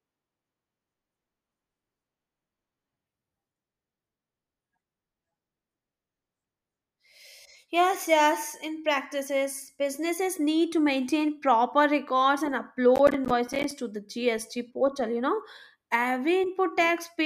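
Processor overload crackle runs from 12.96 to 13.71 s. For about three-quarters of a second the processor can't finish its small audio buffers on time, and deadlines slip one after another. Each missed block, on the order of 10 ms, is replaced by silence with abrupt edges. Roughly fifteen of these dropouts fall close together, so a gritty, tearing crackle rides on the speech. The crackle stops once the load eases.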